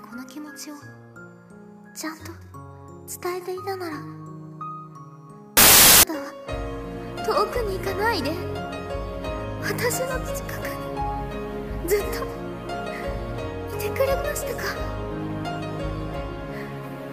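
From 5.57 to 6.03 s there's a wrong sample width fault: packed 24-bit data read as 16-bit, so samples get stitched from mismatched bytes. You hear loud noise with the real sound buried underneath, slowed to two-thirds speed and correspondingly lower in pitch.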